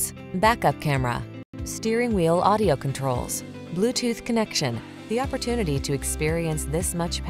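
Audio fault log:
No faults were found anywhere in this clip.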